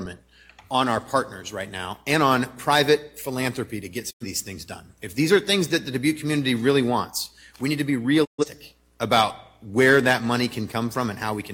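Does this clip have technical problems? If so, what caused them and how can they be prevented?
Yes. A digital broadcast dropout occurs twice, from 4.10 to 4.26 s and from 8.24 to 8.45 s. Each time the sound fades to silence over about 20 ms and later resumes. The receiver muted when incoming frames were lost or failed their error check, so the programme sent during those gaps, roughly 85 ms and 128 ms, is gone, which fits two and then three lost frames. Stronger reception, through better antenna placement or a higher-gain aerial, prevents it.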